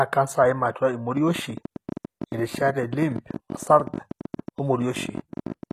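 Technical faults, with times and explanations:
Throughout: HE-AAC compression. The treble of the speech sounds synthetic rather than captured: sibilants come across gritty and metallic, and the top end does not sit naturally on the harmonics below it. This is the likely result of HE-AAC at a low rate, consistent with a bitrate around 24 kbps. The lower band is coded directly while the upper band is rebuilt by copying lower content upward and shaping it with a coarse envelope, so the damage is plainly audible.
1.17 to 5.72 s: train of clicks. A run of short, similar pulses ticks over the speech and through the pauses, arriving at an uneven pace of about 14 per second, roughly seventy in all. The loudest stand out at about 5 dB above the speech level. Their regular shape and sustained repetition point to a likely cause in interference from nearby equipment or a faulty connection or power supply injecting pulses into the signal path.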